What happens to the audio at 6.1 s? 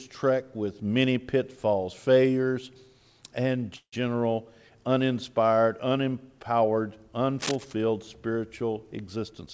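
Nothing goes wrong at 6.1 s: the audio runs on intact through that moment, carried by the call path's wideband codec with its usual top end ending around 8 kHz.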